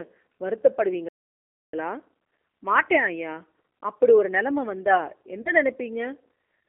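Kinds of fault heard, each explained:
G.729 codec: Throughout, the speech sounds slightly rough and synthetic, confined to a narrow telephone band of about 250 Hz to 3.4 kHz with nothing above. The decoder rebuilds each 10 ms frame from a vocal tract filter, a pitch predictor and a few pulses, at 8 kbit/s.
Playback stall: From 1.09 to 1.74 s the sound drops to silence for about 0.65 s, mid-flow, before carrying on. This is likely the player running out of data, or its thread being held up, until output could resume.
VoIP packet loss concealed by the speech codec: Around 5.42 to 5.51 s the speech smears into a brief buzzy tone or coloured noise that fades. About 40 ms of audio went missing, which fits two lost packets, and the decoder extended its last pitch and filter at falling gain.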